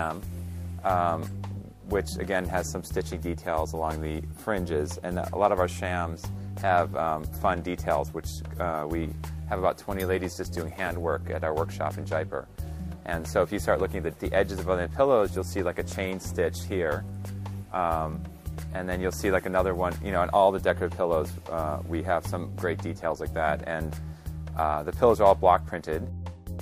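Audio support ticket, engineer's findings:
No audible fault found on review; playback continuous with no defects identified on any path, nothing to escalate.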